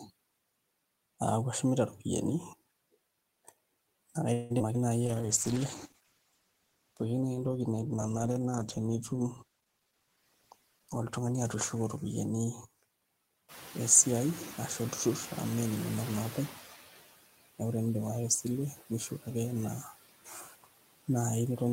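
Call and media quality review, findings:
Noise suppressor artifacts, whole clip: background pulled down by about 17 dB, noise sinking between words and rising under them. Spectrogram: mottled, flickering low-level texture in pauses instead of a smooth noise floor; waveform shows noise pumping up under speech and sinking in gaps.

Call audio freeze, 4.33–4.52 s: 168 ms of the last sound held on as a fading buzz, then speech resumes where it stopped with nothing lost. Likely cause is late packets draining the jitter buffer. Spectrogram: smeared, static harmonic band decaying across the gap. Playout delay rises 168 ms.

Short concealed packet loss, 4.58–4.62 s and 4.74–4.76 s: brief smears or wobbles where about 40 ms of audio each never arrived, patched with extrapolated sound and crossfaded back. Spectrogram: short blurred patches breaking the harmonic lines. Waveform: small discontinuities at the blend points.

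Jitter buffer slow-down, 5.03–5.59 s: speech drawn out at unchanged pitch, playing at about 91% speed. Pitch periods are repeated to add 59 ms of reserve. Spectrogram: stretched harmonics, flat contours. Waveform: copied identical cycles.

Call bitrate drop, 5.06–12.42 s: encoder rate cut from 32 to 13 kbps, held at the low rate for about 5.9 s. Audio turns rough and muffled as coding coarsens and high frequencies go. Spectrogram: upper band cleanly truncated, grainier, blocky time-frequency texture throughout.

Jitter buffer speed-up, 9.78–10.17 s at about 110% speed (roughly 50 ms removed) and 10.79–12.24 s at 107% (roughly 100 ms removed): hurried delivery at the same pitch, with whole pitch periods dropped to trim excess delay. Spectrogram: compressed syllables and tighter gaps, harmonics unchanged in frequency. Waveform: missing cycles at splice points, with no audible gap.

Noise suppressor catching up, 13.48–16.54 s: room noise jumps by about 13 dB near 13.5 s. 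The suppressor's noise estimate lags, cutting only about 8 dB at first, so noise leaks through before settling over about 3 s. Spectrogram: bright noise floor fading gradually.

Speech cut by the noise suppressor, 19.09–19.27 s (dips by about 12 dB, roughly 100 ms affected) and 20.25–20.66 s (about 18 dB, roughly 400 ms): soft speech misclassified as noise, so parts of the speech sound swallowed. Spectrogram: faint, hollowed speech energy matching the floor. Waveform: envelope sagging abruptly.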